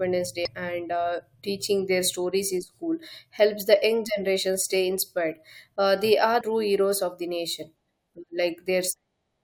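Right near the start, from 0.45 to 0.48 s, there's a brief glitch, and another quick blip at 6.40 s. Both are damaged data in the compressed speech stream: corrupted bytes make the decoder misread those frames and lose sync before locking back on.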